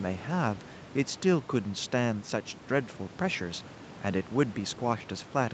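Nothing goes wrong in this bit of speech: there's just a soft room hush sitting about 15 dB under the talking, and the sound tops out around 8 kHz, as you'd expect from an Opus call link carrying it.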